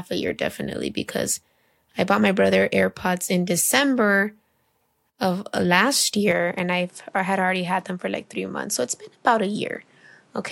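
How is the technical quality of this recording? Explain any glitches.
The recording has one clear glitch, in its final four seconds.

At 6.31 s, right after "of uh last", the sound changes abruptly and stays that way to the end: duller, quieter by roughly 5 dB, with new background noise some 35 dB below the speech. This is most likely an input switched to a poorer device mid-recording. The replacement device passes nothing above 11.4 kHz and brings its own noise floor. There is no gap at the switch. On a spectrogram, the upper band ends in a hard ceiling at 11.4 kHz and a faint noise wash fills the pauses. On a waveform, the envelope steps down at the switch point.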